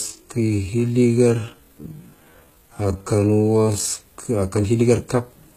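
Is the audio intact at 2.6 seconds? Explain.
No. At 2.6 s the audio sits inside a time-stretched section running from 0.0 to 3.88 s, likely slowed to about 0.57 times its original pace by software that repeats short pieces to fill the length while holding pitch. The sound drags, then the pace jumps back abruptly.

The whole clip also carries HE-AAC compression at a very low bitrate, which fits a rate around 20 kbps. Only the lower spectrum is properly coded, and the treble is rebuilt by copying lower bands upward. S sounds come out gritty and lispy.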